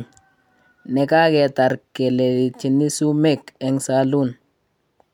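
No technical faults can be heard anywhere in this speech recording.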